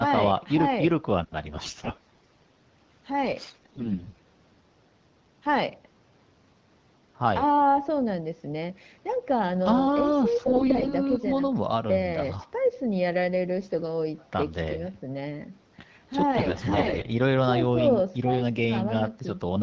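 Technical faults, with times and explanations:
1.50–2.51 s, 3.41–4.21 s, 10.46–10.92 s and 16.35–17.10 s, AMR bit errors: in four bursts the speech turns hoarse, scratchy and gargly, though its pitch and level stay roughly in place. The roughness is worst at 3.41–4.21 s. Bits in the weakly protected part of the AMR-WB frames arrived flipped, from a few percent up to about a fifth. The check over the key bits still passed, so the decoder misplaced its excitation pulses and mis-set fine pitch, gain and spectral values.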